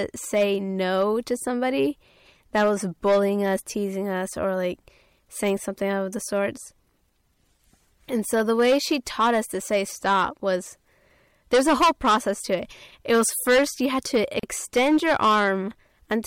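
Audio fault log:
throughout: hard clipping. The speech is driven about 14 dB past what the stage can pass, so a few percent of samples are cut flat at the ceiling. Those squared-off peaks add high harmonics, giving a harsh fuzz on every loud syllable rather than the rounded warmth of soft saturation or the pumping of a limiter.
14.39 to 14.43 s: gap at a join of encoded pieces. A silence of about 39 ms opens in continuous speech, with abrupt, slightly smeared edges, and the sound then resumes exactly where it stopped. Separately encoded pieces were joined without trimming the encoder's start delay and end padding. Nothing is lost or repeated, unlike a network dropout.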